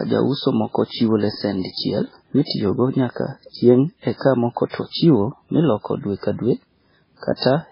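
From start to finish the speech carries heavy MP3 compression damage, likely from encoding at a very low bitrate, around 16 kbps. Nothing is left above 5.3 kHz, so sibilants sound dull and lisped, while starved frequency lines flicker on and off between frames, giving a watery, swirling texture with smeared consonant onsets. On a spectrogram this appears as a flat ceiling at 5.3 kHz, with blotchy, patchy energy beneath it where weak components drop out.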